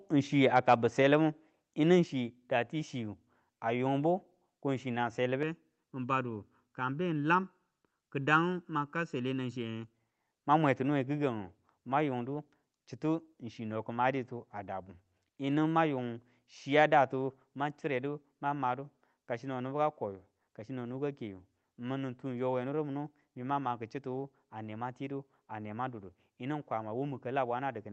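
At 2.04 s, after "libu yinu", the level drops suddenly by about 3 dB, likely a microphone volume stepped down by the call software; the waveform envelope steps lower there.

From 5.43 to 9.94 s, between "ko chinang" and "mang mwe ti nuwe", channel delay (comb filtering) from a sub-millisecond offset summed to mono makes the sound hollow, with evenly spaced spectrogram notches starting around 700 Hz.

At 17.55 s, after "mang yung chiya datu", the microphone volume steps down again by about 3 dB, shown as another abrupt drop in waveform amplitude.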